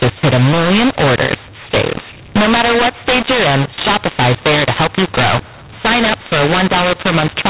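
Mu-law and A-law mixed up, throughout the speech: the G.711 telephone signal, band-limited below 4 kHz, was coded as mu-law but decoded as A-law. Levels come out scrambled, so the speech sounds harsh and distorted, and the pauses fill with noise as the quietest samples are lifted.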